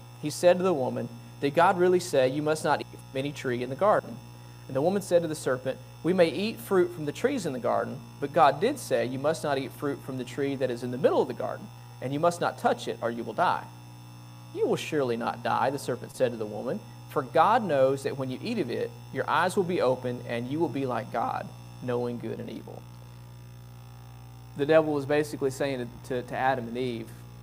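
There's a short concealed packet loss from 16.11 to 16.15 s. About 20 ms of audio didn't arrive in time, so the decoder bridged the gap by extending the preceding sound before blending back, which leaves a brief smeared wobble at that spot.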